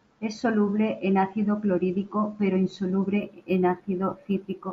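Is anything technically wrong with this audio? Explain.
Yes. From 3.20 s to 4.72 s the speech shows imaging from linear upsampling. The rate was raised from 16 kHz to 44.1 kHz by joining samples with straight lines, a weak interpolation filter that dulls the top of the original band and lets mirror copies of the spectrum through. The first image sits between 8 kHz and 16 kHz, roughly 45 dB below the signal, and comes across as a faint metallic shimmer on sibilants.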